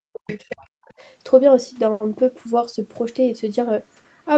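Speech carried over a call path, with nothing above 8 kHz, opens with speech suppressed in double talk between 0.12 and 0.92 s. The talker dips by roughly 40 dB at the deepest point and breaks up over most of that span, most likely because an echo canceller turned everything down while both sides spoke. The waveform shows the envelope collapsing, and the spectrogram shows harmonics fading out. Inside that window, from 0.27 to 0.54 s, the other side's voice leaks through faintly, around 20 dB below the talker. It is likely loudspeaker echo that the canceller did not fully remove, and on a spectrogram it appears as a second, weaker harmonic pattern that does not line up with the talker's.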